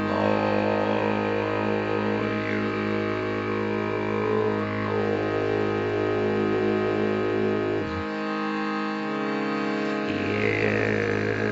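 No technical faults are audible anywhere here.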